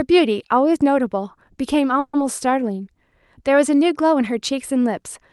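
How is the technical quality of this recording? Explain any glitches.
One glitch stands out in this speech, carried over an Opus call path whose highs stop near 12 kHz. From 1.99 to 2.15 s a call audio freeze holds the last sound as a fading buzz for about 0.14 s, likely because delayed packets emptied the jitter buffer. Unlike a dropout, the speech then resumes intact, just slightly later.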